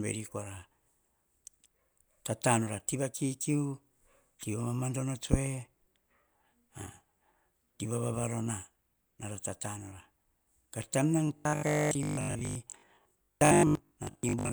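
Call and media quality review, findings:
Robotic sound from repeated short buffers, 11.27 to 14.51 s: speech turns into a rigid metallic buzz at 50 Hz, loosely following the words. Likely playout buffer starving; the last chunk, consistent with a 20 ms buffer, is replayed for about half the time.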